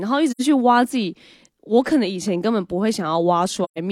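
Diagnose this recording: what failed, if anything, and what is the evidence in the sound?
Codec stage: AAC frame loss with muting. The decoder zeroed the spectrum of lost frames, leaving soft-faded holes at 0.31–0.42 s and 3.64–3.78 s, consistent with two and three lost frames.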